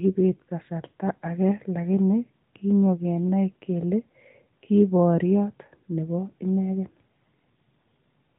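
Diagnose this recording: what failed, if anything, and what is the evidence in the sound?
Nothing in this speech recording points to a failure at any stage; it carries the narrowband band limit of a mobile call path, with nothing above about 4 kHz, and that codec is doing its ordinary job rather than breaking down.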